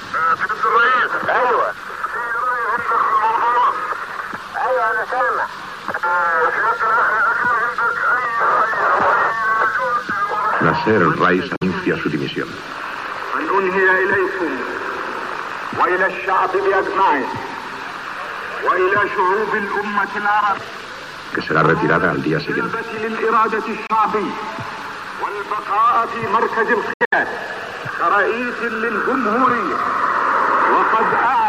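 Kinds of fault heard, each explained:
Bluetooth dropout: the sound cuts out abruptly and resumes as if it had kept playing, likely from wireless packets arriving late and being discarded. About 46 ms goes at 11.56 s and about 23 ms at 23.87 s. From 26.93 s, gaps totalling about 139 ms scatter over roughly 190 ms, the longest near 70 ms. A waveform shows flat, sharp-edged stretches of silence, and a spectrogram shows blank vertical columns.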